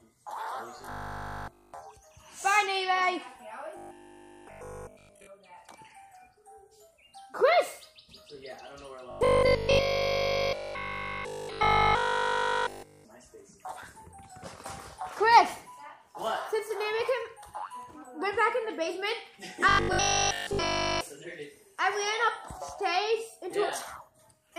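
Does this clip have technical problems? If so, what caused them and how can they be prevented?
Yes. Robotic sound from repeated short buffers appears at 0.78–1.74 s, 3.77–5.27 s, 9.11–13.05 s and 19.69–21.01 s, where nearly all of the sound turns into a rigid, metallic 50 Hz buzz. That rate fits a 20 ms chunk being replayed over and over, likely because audio arrived too slowly and playback looped its last buffer. On a spectrogram these stretches show evenly spaced horizontal harmonics every 50 Hz, and the waveform shows an identical short shape tiling end to end. Larger buffers or a jitter buffer, with a scheduling priority high enough that the audio stream never starves, would prevent it.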